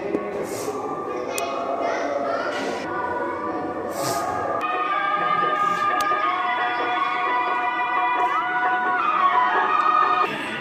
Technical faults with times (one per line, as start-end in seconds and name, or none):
1.38 electrical switching spike
6.01 electrical switching spike